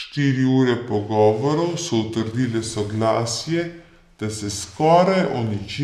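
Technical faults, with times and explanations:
Throughout, wrong sample rate: the speech sounds low and slow, running at about 0.73 times normal speed and roughly 5.5 semitones lower in pitch. Speed and pitch shift together, which fits 44.1 kHz audio being played at 32 kHz without conversion.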